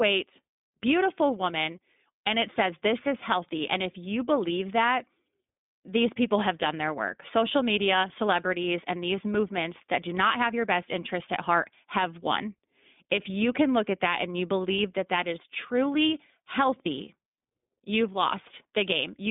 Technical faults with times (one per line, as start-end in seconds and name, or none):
0.00-19.30 iLBC codec